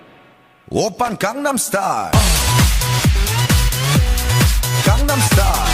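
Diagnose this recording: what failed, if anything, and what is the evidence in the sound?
A brief irregular burst of scratchy crackle from 1.05 to 1.12 s points to loose connector crackle in the analogue wiring. For about 76 ms a worn or dirty contact was rapidly making and breaking, chopping the signal.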